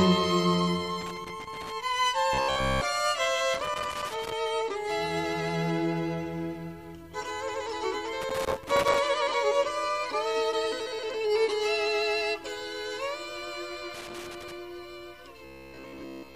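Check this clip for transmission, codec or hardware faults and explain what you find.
Two kinds of fault occur: four bursts of loose connector crackle and two stretches of robotic sound from repeated short buffers.

Loose connector crackle appears at 1.01–1.72 s, 3.54–4.32 s, 8.22–8.99 s and 13.94–14.52 s. A worn or dirty contact keeps making and breaking, chopping the signal on and off, so each burst is an irregular scratching crackle. On a waveform these show as ragged dropouts and spikes. On a spectrogram they appear as scattered vertical broadband streaks.

Robotic sound from repeated short buffers occurs at 2.33–2.81 s and 15.45–16.35 s. The audio takes on a rigid, metallic buzz at 66.7 Hz. A period of about 15 ms fits playback likely being starved and filling gaps by looping the last 15 ms of audio while fresh material is skipped. The first stretch is repeated throughout and the second for most of its length. 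A spectrogram shows evenly spaced harmonics of 66.7 Hz, and the waveform shows an identical short cycle tiling itself.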